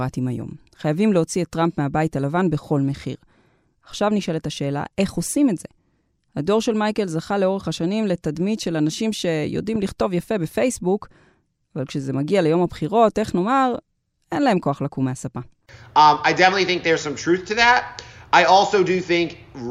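A speech recording with one fault, a loud pop. At 9.75 s two sharp pops land in quick succession, ending by 9.91 s. They peak a little above the speech, which continues underneath. The likely cause is a sudden voltage pulse, such as a plug, switch or static discharge.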